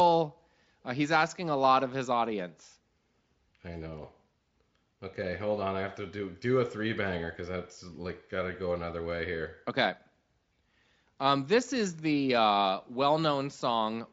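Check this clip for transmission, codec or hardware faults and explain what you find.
No transmission, codec or hardware faults can be heard in this speech; it passes through Speex at what sounds like a high-quality setting, with any coding damage faint at most.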